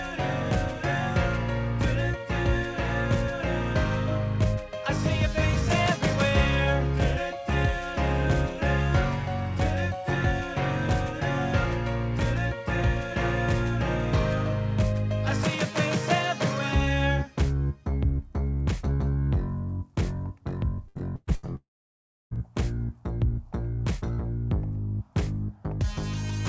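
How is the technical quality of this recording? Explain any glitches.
The recording has two packet-loss faults late in the clip. Content above 8 kHz is absent, which points to a G.722 call path at 64 kbps.

Repeated packet loss (robotic sound), 20.88 to 21.51 s: five gaps, longest 114 ms, each patched by extending the previous sound, concealing about 44% of the span. It sounds choppy with pieces missing.

From 21.56 to 22.34 s, about 0.76 s of audio is gone, likely a long network dropout. The concealment fades into about 0.67 s of silence, and the audio resumes without the lost section.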